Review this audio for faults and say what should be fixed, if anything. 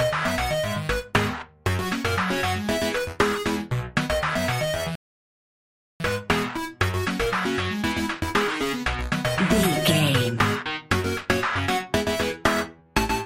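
At 4.95 s there's a rebuffering stall: the sound drops to silence and only picks up again at 6.00 s, carrying on from exactly the point where it cut out. The player ran through the audio it had downloaded and had to wait for more to arrive, so nothing's missing, but the gap pads the timeline by about 1.05 s. To prevent it, give the player a deeper buffer before starting playback, or deliver the stream at a bitrate the connection can sustain.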